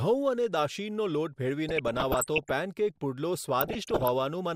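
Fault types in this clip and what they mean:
DAB burbling: weak-reception bit errors corrupt MP2 sub-bands, so the speech gets short noise blips and sub-band level jumps at 1.69–2.51 s and 3.61–4.08 s; spectrograms show flickering, frame-long band patches.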